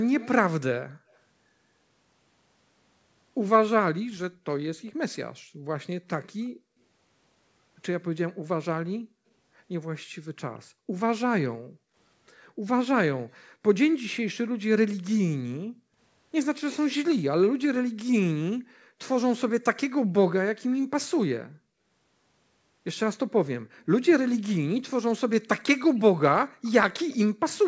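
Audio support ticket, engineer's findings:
Echo leak, 0.19–1.18 s and 23.67–27.58 s: delayed copy of speech about 186 ms behind, roughly 15 dB then 20 dB down. Likely far-end loudspeaker pickup escaping the echo canceller.

Background gated by the echo canceller, 0.86–1.11 s, 4.31–8.44 s, 11.56–11.95 s, 15.65–15.98 s, 26.5–26.63 s: room tone dips up to about 40 dB. Canceller suppresses the mic while the loudspeaker plays.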